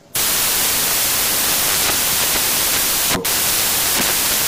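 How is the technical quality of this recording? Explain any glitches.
Pretty rough, honestly: the whole clip is buried under loud, harsh broadband noise. That's samples built from the wrong bytes, running from start to finish. The reader assembles each sample's bytes wrongly, so the jittery low bits end up as the big part of every value. You get a hiss-like wash.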